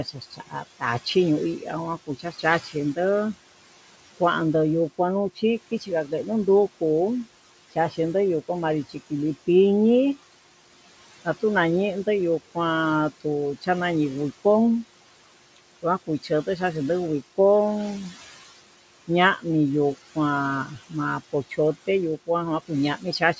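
Throughout the speech, noise suppressor artifacts come from a suppressor pulling down whatever bands it judges to be steady noise, frame by frame, by about 16 dB. The room noise, which sits about 15 dB under the voice, drops away in the gaps and swells back beneath each phrase. The band stops at 8 kHz, which fits a G.722 call path at 64 kbps.

The same suppressor also produces speech cut by the noise suppressor. It mistakes parts of the voice for noise and turns them down with the background, at 0.04–1.06 s, 1.59–2.97 s, 4.98–6.12 s, 7.72–9.48 s, 13.21–13.68 s, 15.57–16.58 s, and from 20.15 s to the end. Inside each of the first six spans only brief fragments, a tenth to a third of a second in total, are pushed down. Across all the spans the drop is about 11 to 16 dB. Those parts of the speech sound swallowed or faint.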